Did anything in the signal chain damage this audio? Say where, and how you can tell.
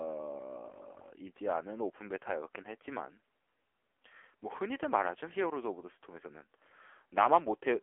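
Yes. For the whole of the speech the voice sounds buzzy and synthetic, with a hollow, boxed-in quality. Nothing reaches above 3.4 kHz, and little is left below 300 Hz. This is damage at the codec stage, from the AMR narrowband mobile codec. AMR-NB rebuilds speech from a vocal-tract model excited by a few pulses per frame. The heavy artificiality fits one of its low modes, around 6.7 kbps, and the band matches a 300 Hz to 3.4 kHz phone line.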